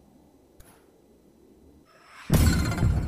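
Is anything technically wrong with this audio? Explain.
Yes. Throughout, the audio is read two samples at a time (double speed): consecutive sample pairs are treated as one frame, so everything plays twice as fast and 12 semitones higher. On a spectrogram, energy shifts up an octave, and the waveform looks compressed in time.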